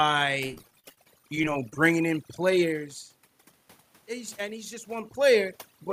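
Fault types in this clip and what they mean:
Overdone noise removal: Noise reduction set far too aggressively runs through the whole clip, driving bands near the noise floor almost to nothing. The background drops and breaks into twinkling specks, which a spectrogram shows as isolated flickering dots and ragged, hollowed-out harmonics.
Repeated packet loss (robotic sound): From 0.46 to 1.76 s, just before "in players", the audio breaks into choppy fragments. Over twenty short holes, the longest about 39 ms, are patched by stretching the preceding sound, concealing roughly a quarter of that span. The waveform shows repeated smeared or flattened segments, and the spectrogram shows blurred, repeated slices.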